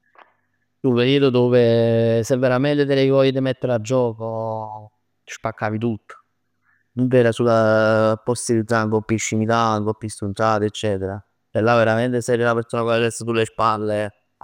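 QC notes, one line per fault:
No fault found.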